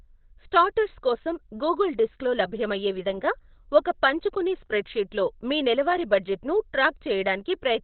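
Speech that sounds muffled and hoarse throughout, with a flat spectrogram ceiling near 4.2 kHz and empty above; likely heavy Opus compression in narrowband speech mode, fitting about 12 kbps.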